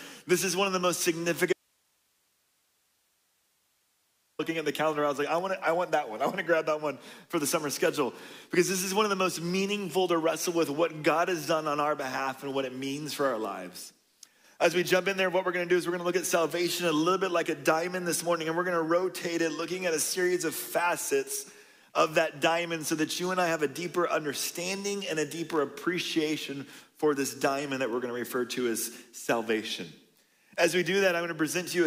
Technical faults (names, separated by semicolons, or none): audio dropout to a faint residue